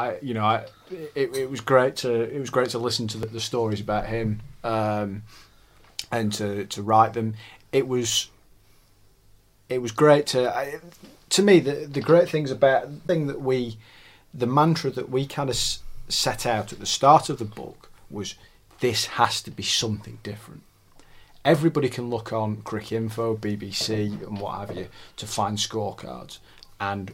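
At 3.23 s and again at 13.08 s there is a CD skip: the laser lost its track and landed on another turn of the disc's spiral. Each is heard as a tiny tick, a mute of only a few milliseconds, after which the sound resumes from a different point rather than where it left off. Unlike a plain dropout, where the gap simply swallows a stretch and playback continues in sequence, a skip displaces the material itself.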